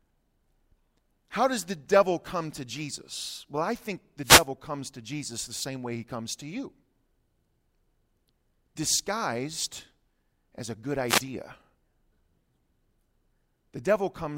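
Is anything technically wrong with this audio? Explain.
Yes, two wireless microphone noise hits, at 4.23 to 4.47 s and 11.07 to 11.22 s: the FM radio signal fades, so receiver static swishes over the speech, unlike a digital dropout's silence.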